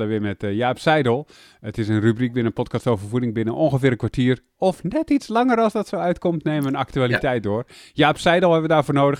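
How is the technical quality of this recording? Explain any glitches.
Nothing in this recording stands out as a glitch, so there's no technical fault to explain here.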